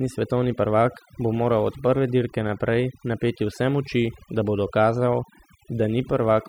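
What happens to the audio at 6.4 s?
At 6.4 s you're still hearing the overdone noise removal that runs through the whole clip. The reduction was set so hard that bands near the noise floor get pulled down or switched off, taking quiet parts of the speech along, so the background drops and breaks up into twinkly specks.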